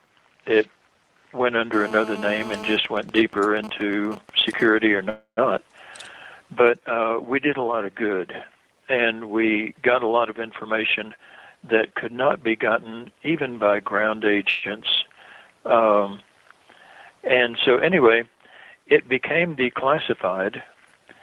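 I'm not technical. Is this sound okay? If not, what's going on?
No. There are four kinds of problem.

From 1.73 to 2.76 s you hear a GSM phone buzz. A 2G mobile phone near the equipment was on a call. Its radio pulses leaked into the audio circuit as a harsh, raspy buzz at 217 Hz, unrelated to the sound itself.

From 2.85 to 4.66 s come GSM signalling bursts. The same phone, with its user silent in the call, sent only short groups of pulses. These leak in as even ticks with a longer buzz twice a second.

At 5.09 s there is a call audio freeze lasting about 0.28 s. The last sound is stretched into a fading buzz or hiss that ends in a tenth of a second of silence. Then the audio carries on from where it stopped. A shorter freeze, about 0.13 s and without silence, happens at 14.49 s. Network packets were likely held up on the way.

From 10.67 to 13.49 s, and again from 20.74 to 21.08 s, there is a jitter buffer speed-up. 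The receiver had too much audio waiting, so it cut out tiny slices to catch up. The sound plays about 10% faster at the same pitch and feels hurried.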